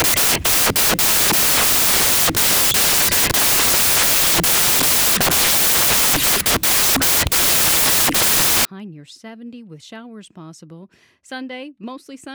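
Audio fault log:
0.00–8.65 s: samples built from the wrong bytes. Each sample's bytes are assembled in the wrong order or offset, so the rapidly fluctuating low bits land in the high positions and the speech turns into loud, harsh broadband noise, close to white on the loud sounds.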